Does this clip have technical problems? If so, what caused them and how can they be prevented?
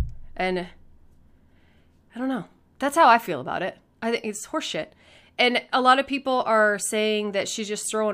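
No, there's nothing technically wrong to hear in this speech recording, so there's no cause to track down and nothing that needs preventing.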